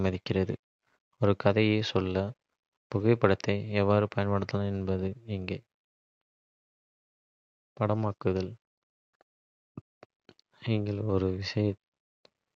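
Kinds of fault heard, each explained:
No kinds of fault are heard in this speech clip.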